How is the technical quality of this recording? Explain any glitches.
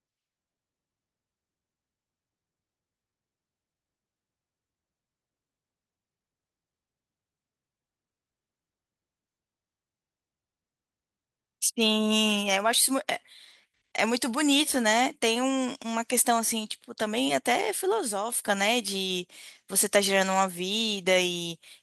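The recording is in good technical order, with no glitches anywhere in it to explain.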